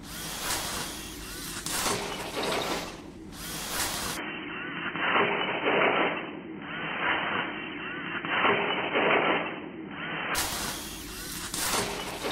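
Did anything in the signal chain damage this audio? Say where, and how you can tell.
Yes. From 4.17 s to 10.35 s the audio changes character with no silence at the switch: the level shifts by about 5 dB, and a new background noise appears about 30 dB below the sound, ending at 10.35 s. This is likely an input switched to a poorer device, at the driver or capture stage, with a narrower-band microphone taking over. A codec change would not bring its own noise floor and level step, and this one lasts six seconds rather than two.

Inside that stretch, from 4.29 s to 6.29 s, codec artefacts rise abruptly and then clear with no gap. This fits an adaptive stream at a lower bitrate, at the network and codec stage, dropping from 96 kbit/s AAC-LC to 16 kbit/s HE-AAC. At that rate the encoder rebuilds the treble from the lower band, so it turns synthetic. Unlike the device switch, this adds no new noise or level change and ends while the other fault is still present.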